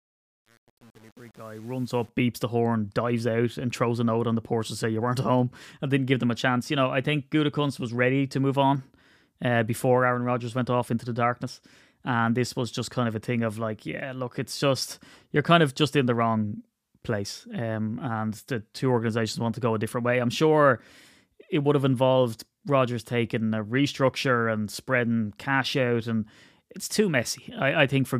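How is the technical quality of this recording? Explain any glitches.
One glitch stands out: truncation distortion on the opening fade-in, from 0 to 2.09 s, just before "beeps the horn dives". The fade stage drops to what sounds like 8 bits without dither, so the quiet start sounds gritty. The waveform shows square stair-steps, and the spectrogram shows broadband speckle.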